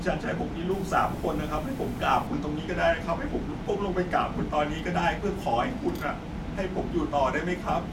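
Speech clip with grainy, signal-following distortion from 0.71 to 2.27 s, likely low bit depth without dither: truncated samples leave an error floor roughly 25 dB below the speech, consistent with about 7-bit resolution, so quieter passages turn rough and gritty.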